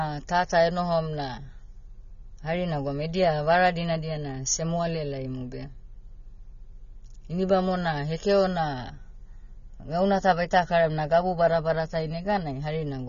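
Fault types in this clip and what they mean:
AAC compression: the speech has nothing above 6.9 kHz and sounds dull and smeared throughout, with plainly audible coding damage. This is likely AAC-LC at a low bitrate, around 24 kbps, cutting the top band and coarsely quantising what remains.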